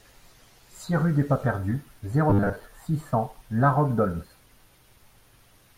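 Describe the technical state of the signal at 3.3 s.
At 3.3 s the speech signal is intact, with no audible technical fault at that moment.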